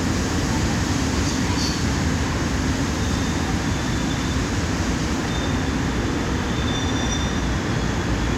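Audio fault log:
No faults heard anywhere in this recording.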